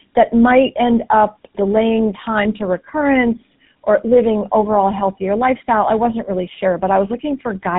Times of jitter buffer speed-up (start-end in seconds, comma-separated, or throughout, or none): none